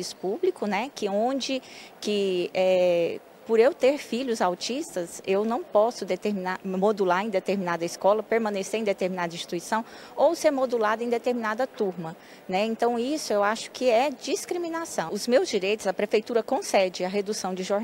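No technical faults can be heard anywhere in the audio.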